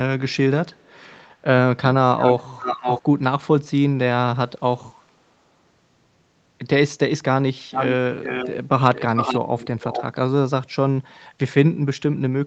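Delayed copies of the speech return at 0.68–1.26, 2.56–3.02, 7.72–7.93, 8.23–8.57 and 8.95–9.4 s. This is echo leak, likely from a loudspeaker echo canceller letting sound through. Lags of 0.44 s (0.59 s in the second) give distinct repeats rather than smeared reverberation. Only the first is faint.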